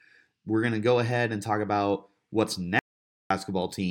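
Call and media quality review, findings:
Audio dropout to silence, 2.79 to 3.30 s: speech cuts off mid-phrase after "and talk about what's", dead silence with no room tone for about 0.51 s. Likely input loss (link or device dropout, stray mute), with the encoder writing silence meanwhile.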